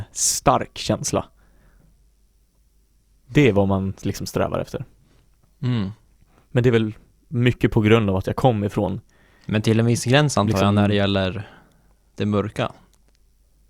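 From 2.25 s to 6.25 s, the speech plays through an adaptive stream at a lower bitrate. The connection slowed, so the player switched to a cheaper encoding of the same stream. The change is abrupt, with no gap. Codec artefacts rise. The sound points to a halving of the data rate, consistent with Opus falling from 64 to 32 kbit/s. At 6.25 s the fuller quality snaps back.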